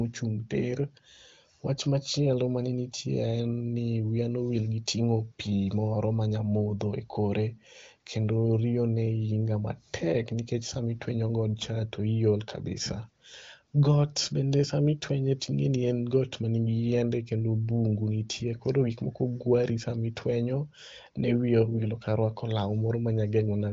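Nothing here counts as a technical fault: the speech comes through the AMR wideband (HD Voice) codec with its usual limited bandwidth, with nothing above 7.7 kHz, and with little or no audible damage at a rate of 23.05 kbit/s, near the codec's top setting.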